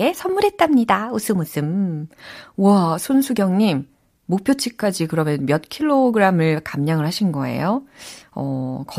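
Speech with no audible faults.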